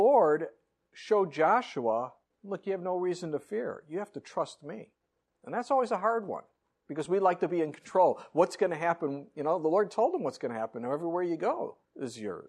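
Lost LE Audio frames at 7.05 s: a gap of about 7.5 ms, which fits a single LC3 frame, is concealed by the decoder reusing the previous frame's spectrum with randomised signs. The audio briefly turns into a short, noisy smear before normal decoding resumes.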